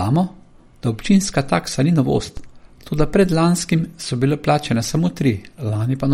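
From start to finish the speech has plainly audible MP3 compression damage, likely from an encoder starved of bits at a rate around 48 kbps. Everything above 16.5 kHz is gone, and the weakest detail flickers between frames, giving a watery, swirly texture with chirpy sibilants.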